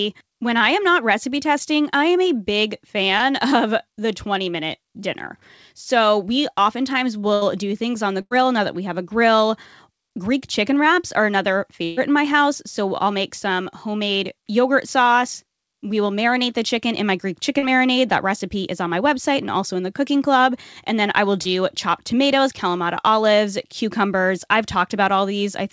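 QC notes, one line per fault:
3.18–3.22 s, short concealed packet loss: about 20 ms of audio never arrived in time. The receiver extended the preceding sound, then blended back in, leaving a brief smear.
7.34–7.43 s, burst of packet loss: about 80 ms is lost between "we oftentimes" and "do things on the". The last sound is stretched and faded, then playback resumes further on.
8.21–8.33 s, burst of packet loss: about 100 ms is missing. Concealment holds the prior sound as a decaying buzz or hiss before the audio jumps ahead.
11.85–11.99 s, burst of packet loss: about 120 ms is missing after "chicken wraps are another", before "in my house". The gap is fully covered by a fading extension, with no silence.
17.59–17.64 s, short concealed packet loss: about 40 ms is lost and filled by continuing the previous sound, which is heard as a quick wobble.
21.42–21.47 s, short concealed packet loss: about 20 ms is missing between "then I will" and "chopped tomatoes". 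The filled stretch smears briefly before the real audio returns.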